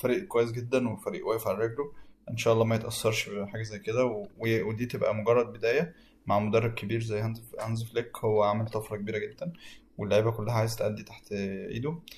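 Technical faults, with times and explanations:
No technical faults can be heard in this recording.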